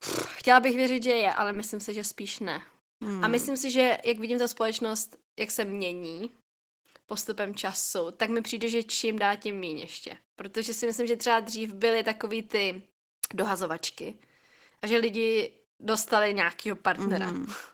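Speech runs throughout through Opus voice compression in hybrid mode, with the SILK linear-prediction coder handling the band below 8 kHz and a CELT layer above it, in 20 ms frames, at a rate that fits roughly 16 kbps. The band stays fullband, reaching about 20.5 kHz, but the excitation is coded coarsely, so the speech sounds plainly hoarse and slightly robotic from start to finish.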